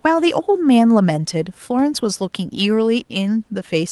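Nothing stood out on listening to this speech; the low room noise, about 41 dB beneath the talking, simply sits in the background.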